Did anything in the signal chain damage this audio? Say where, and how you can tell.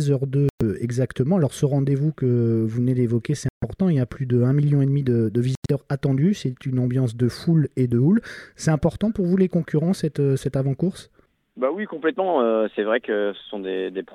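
Yes, at the codec stage: corrupt frame muted. Sound drops abruptly to silence at 0.49–0.62 s, 3.49–3.64 s and 5.55–5.71 s, gaps of several frame lengths where damaged frames were rejected and replaced with silence. The waveform shows flat blocks, the spectrogram full-height blank columns, with timing unchanged.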